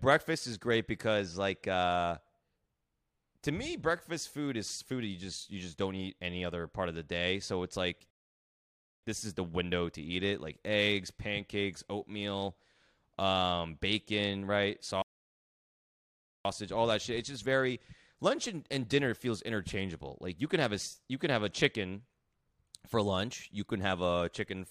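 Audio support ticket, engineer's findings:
Rebuffering stall, two events. Player buffer drained, playback halted until more data arrived.
8.11–9.03 s: dead silence after "it's like", resumes cleanly on "this is the window". About 0.93 s added.
15.02–16.45 s: silence after "um bacon right", picks up at "all that shit". About 1.43 s added.
No audio dropped; speech continues from the exact stop point, only delayed.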